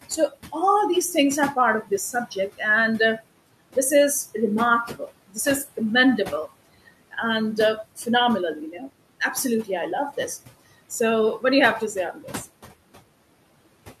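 Noise suppressor artifacts run through the whole speech clip. The suppressor pulls down bands it judges to be steady noise, cutting the room noise, which sits about 18 dB below the speech, by about 18 dB between phrases. That noise then swells back up underneath each phrase.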